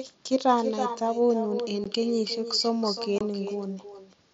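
From start to end, the speech is trailed by an echo with no canceller: the far end's loudspeaker feeds its microphone and nothing subtracts it, so each phrase returns around a third of a second later, about 8 dB down, thinner than the original.

At 1.84 s there is unconcealed Bluetooth headset packet loss, a 15 ms hole with hard edges that fits two lost packets over the headset link. At 3.18 to 3.21 s a second, 22.5 ms gap follows, likely three packets, and it is replaced by silence or an idle pattern rather than filled in, so both gaps have abrupt edges. The link itself runs the mSBC wideband codec, whose light graininess on louder syllables can be heard.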